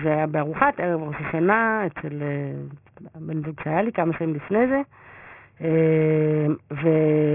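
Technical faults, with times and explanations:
Throughout: aliasing. The sample rate was lowered with no anti-alias filter, which fits a drop from 48 kHz to 6 kHz. Content above 3 kHz folds back as unrelated tones about 15 dB below the speech, so sibilants sound gritty and metallic, with energy packed hard against 3 kHz.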